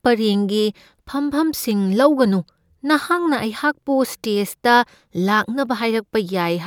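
No technical faults can be heard anywhere in this speech recording.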